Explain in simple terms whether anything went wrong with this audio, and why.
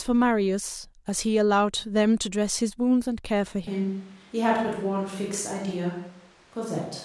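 At 3.67 seconds the recording likely loses its close microphone, switching to a distant microphone until the end. The voice suddenly turns roomy and hollow, with thinner bass and faint background room noise, though its loudness stays about the same.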